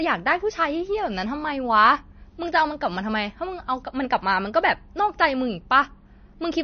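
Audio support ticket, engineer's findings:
Whole clip: treble stops dead near 6.5 kHz, watery swirl on the speech, s sounds chirpy and metallic, onsets smeared. Likely MP3 compression, heavy enough to fit a bitrate around 32 kbps: encoder drops high band, weak spectral lines flicker between frames.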